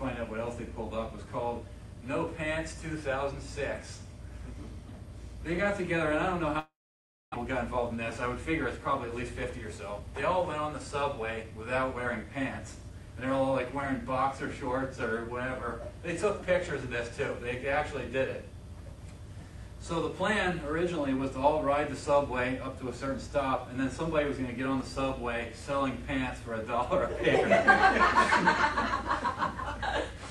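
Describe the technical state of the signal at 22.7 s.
At 22.7 s the signal is intact, with no dropout, distortion, glitch or other technical fault audible at that point.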